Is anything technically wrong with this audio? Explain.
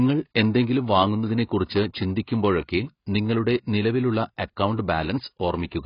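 Yes, throughout the speech there's heavy AAC compression damage: nothing above about 5.1 kHz, plus smeared, warbly sibilants, likely from AAC-LC coarsely quantising frequency lines at a low bitrate around 16 kbps.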